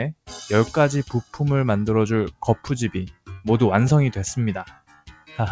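Throughout the clip a noise suppressor applied to music or sounds keeps pulling level up and down by around 10 dB. Held and decaying material sinks while onsets pass, so the sound pumps and thins. On a waveform the envelope breathes unevenly, and a spectrogram shows sustained bands fading behind each attack.

Sound cut by the noise suppressor then hits four spans: 1.05–1.37 s (about 11 dB down), 2.32–2.67 s (about 17 dB), 3.1–3.3 s (about 18 dB) and 4.65–5.36 s (about 17 dB). The first three leave roughly a fifth of a second hollowed, and the last hollows out about 0.7 s. Each appears as a sudden waveform dip and a faded spectrogram patch where tails are clipped short.

Beneath this, the call-codec path shows an empty spectrogram above 8 kHz, which fits 64 kbps G.722.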